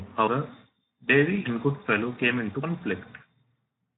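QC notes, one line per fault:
Throughout, Speex codec: speech sounds hoarse and noisy from starved CELP excitation, consistent with about 11 kbps; spectrogram shows nothing above 3.8 kHz.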